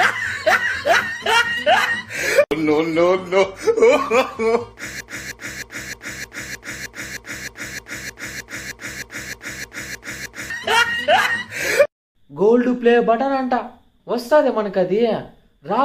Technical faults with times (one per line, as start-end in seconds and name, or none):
5.01-10.50 broken-record loop